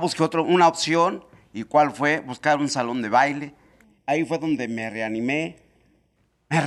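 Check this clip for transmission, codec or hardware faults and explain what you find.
One fault is present in this speech. From 3.84 to 6.16 s, after "un salón de baile", channel delay (comb filtering): one channel lags by under half a millisecond, and mono summing cancels evenly spaced frequencies from around 1.5 kHz, leaving a hollow, phasey sound.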